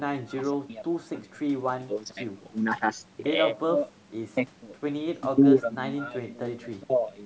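No technical faults occur at any point in this speech; the call microphone processing simply leaves nothing above 8 kHz and trims the lowest bass, as it normally does.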